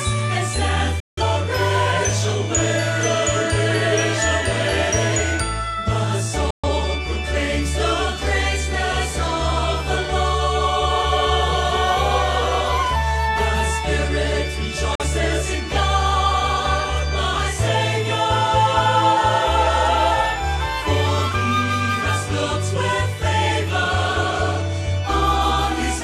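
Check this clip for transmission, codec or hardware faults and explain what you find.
There is one transmission fault, repeated three times. Digital broadcast dropout at 1.0–1.23 s, 6.50–6.69 s and 14.95–15.05 s: the receiver lost the signal or got frames that failed their checksum, so it muted. Each hole fades out in about 3 ms, and the losses of about 171, 128 and 43 ms fit four, three and one lost frames.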